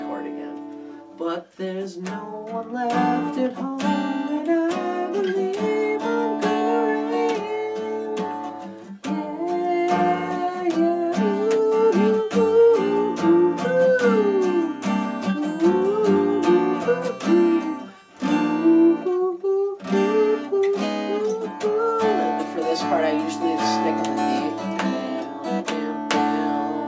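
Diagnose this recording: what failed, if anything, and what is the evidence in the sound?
Nothing stood out on listening that would point to a failure at any stage of the chain.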